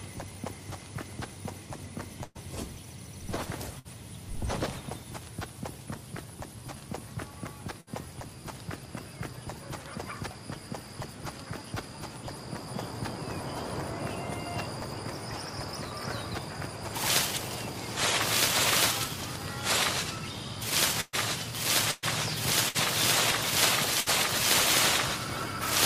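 Bursts of packet loss at 2.23, 3.79, 7.81, 21.01, 21.91, 22.68 and 24.00 s drop 60 to 120 ms. Concealment holds a fading buzz or hiss, seen as smeared, decaying spectrogram bands, before the audio jumps ahead.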